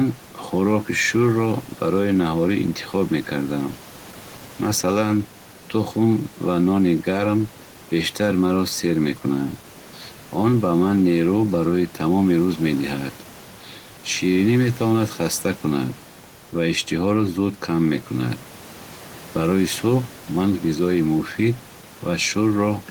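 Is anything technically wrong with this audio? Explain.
No, nothing technically wrong here.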